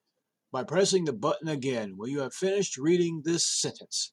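No dropouts, clicks, distortion or timing errors turn up anywhere in the recording, so there is nothing to log.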